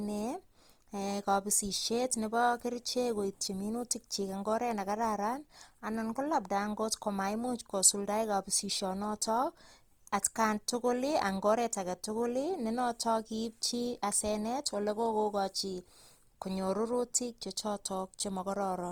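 Throughout the clip, the speech sounds rough and grainy. Smooth tones turn noisy. The top end still reaches about 20.2 kHz. This is likely Opus compression in its music mode. Starved bands are filled with noise, which fits a rate near 24 kbps.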